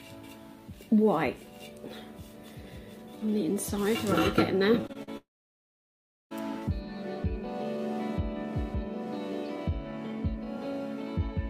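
From 4.81 to 5.09 s the sound turns choppy. This is repeated packet loss, giving a robotic sound. Four short holes appear, the longest 43 ms. Each is patched by stretching the last sound. About 35% of that stretch is filled this way.

At 5.17 s the audio breaks off until 6.33 s. A brief buzz carries the last sound forward, then roughly a second of silence follows. The likely cause is a long network dropout. The missing part never returns.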